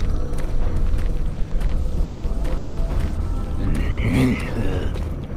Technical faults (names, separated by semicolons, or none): repeated stalls (stutter); short stall from a late packet